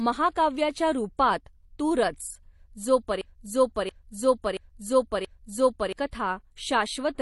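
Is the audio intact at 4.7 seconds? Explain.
No. From 3.21 to 5.93 s a broken-record loop repeats one 0.68 s fragment four times, likely a stalled stream, showing identical repeating waveform blocks. Throughout, transcoding between lossy codecs, likely MP3 then HE-AAC, layers smeared artefacts and leaves an empty spectrogram above 11.5 kHz.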